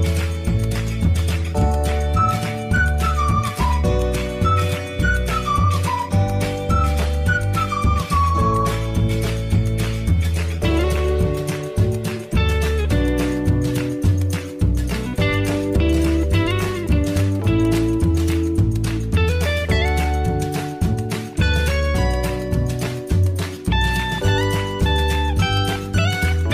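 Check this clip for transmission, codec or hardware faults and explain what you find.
Nothing faulty can be heard anywhere in this clip.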